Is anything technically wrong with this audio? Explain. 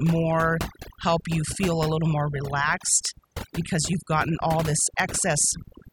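Yes. This speech clip suffers from overdone noise removal, and it runs through the whole recording. A noise reduction process was pushed too hard. Whenever a frequency band sits close to its noise estimate, it cuts that band deeply or mutes it. Quiet parts of the voice fall below that line and vanish with the noise. The background drops, broken up by twinkling specks.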